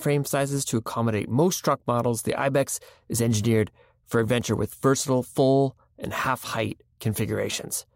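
No technical faults occur at any point in this speech recording.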